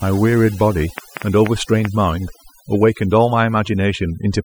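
A speech clip with overdone noise removal applied throughout. The noise reduction was pushed too hard, so any frequency band sitting close to its noise estimate gets pulled far down or switched off entirely. Low-level parts of the speech fall under that threshold and are removed along with the noise. The result is a near-silent background scattered with twinkling specks. From 0.98 to 1.86 s there is also a train of clicks: around five similar sharp pulses at an average of 4.6 per second, spaced irregularly and peaking about 15 dB above the speech. They sit on top of the audio as a ticking pattern and are heard in the gaps as well as over the speech. The likely cause is interference from nearby equipment or a faulty connection or power supply.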